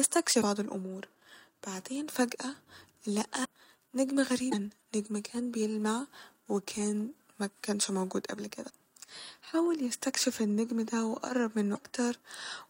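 Five brief glitches interrupt the speech at 0.41–0.44 s, 3.44–3.47 s, 4.51–4.54 s, 8.69–8.72 s and 11.74–11.78 s, each lasting about one 26 ms MP3 frame. They point to a broken MP3 bit reservoir, the likely cause. A decoder after a cut reads leftover bytes from the wrong frame, so the audio skips forward. Unlike a clean dropout, the sound lurches ahead rather than simply going silent.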